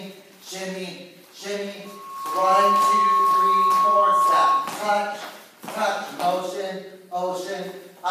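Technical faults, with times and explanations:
1.85–4.82 s, loudspeaker feedback squeal: the microphone picked up its own loudspeaker and the loop gain rose past unity at 1.1 kHz, so that tone kept reinforcing itself, swelling in under a second into a steady squeal about 10 dB above the surrounding sound.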